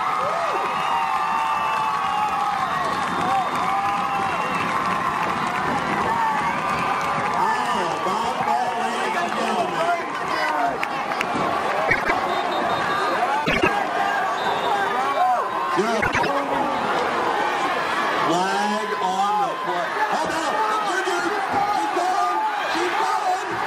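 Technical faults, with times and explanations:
11.88–12.11 s, 13.45–13.68 s and 16.01–16.29 s: frames out of order. In each stretch, two adjacent blocks play swapped, about 78 ms each in the first two and 105 ms in the third. That fits runs of three or four frames. The result is a brief garbled flutter. No time is lost.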